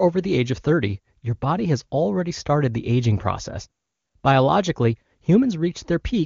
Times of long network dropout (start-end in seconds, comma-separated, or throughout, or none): none